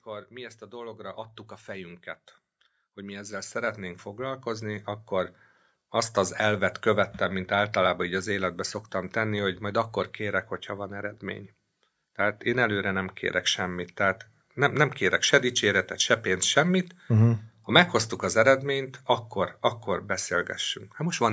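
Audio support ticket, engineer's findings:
Speech and background swell together, gradually louder from 0.05 s to 6.7 s, settling just before "követtem mint általában így". Automatic gain rising: AGC judged the input too quiet and ramped its gain up by about 17 dB over several seconds. Call microphone processing audible as normal band-limiting, nothing above 8 kHz, lowest bass trimmed by its high-pass filter.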